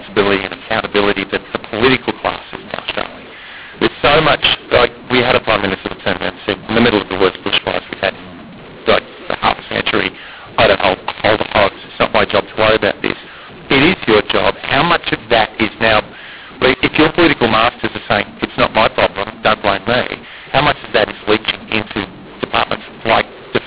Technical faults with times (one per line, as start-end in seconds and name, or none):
0.00-23.67 mu-law and A-law mixed up